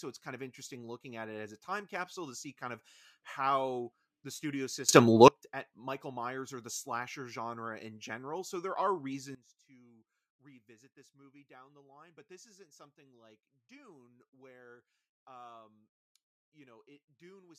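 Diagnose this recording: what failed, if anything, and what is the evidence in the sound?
Sudden gain jumps, likely unramped digital gain changes: speech and noise leap together about 22 dB after "of how the studio" (4.89–5.28 s), and drop about 19 dB after "there are" at 9.35 s.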